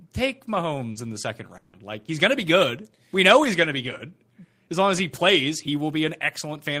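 From 0.91 to 0.98 s a brief smear blurs the speech. This is short concealed packet loss: about 40 ms never arrived, so the receiver stretched the preceding sound to cover the hole. Inside it, from 0.95 to 0.97 s and just before "in the second", a rough, noisy patch marks a lost packet rebuilt from error correction. The decoder played a 20 ms low-bitrate copy carried in the next packet.

Right after "in the second", from 1.57 to 1.76 s, the sound turns into a fading buzzy continuation for about 0.16 s before speech returns with that stretch missing. The likely cause is a long network dropout, with the receiver extending the last sound instead of leaving silence. Near its end, from 1.73 to 1.75 s, another 20 ms lost packet rebuilt from error correction adds a brief coarse, grainy texture.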